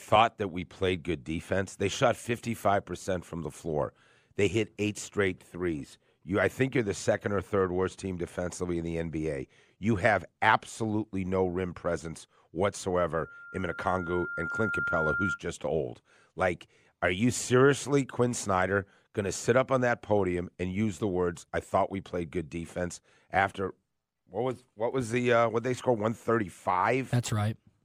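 At 13.21 s a loudspeaker feedback squeal begins: a 1.4 kHz tone swells over about one and a half seconds. It reaches roughly speech level, then stops at 15.39 s.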